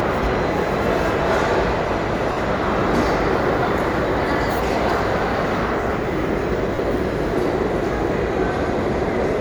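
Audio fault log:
2.32–2.37 s and 6.75–6.78 s, lost LE Audio frames: the Bluetooth LE Audio link dropped about 50 ms and then about 30 ms of audio, which fits five and three lost 10 ms frames. For each gap the LC3 decoder reused the last good spectrum with randomised signs, fading it as the gap went on. Tonal content in the sound turns into a short, noisy smear at those points.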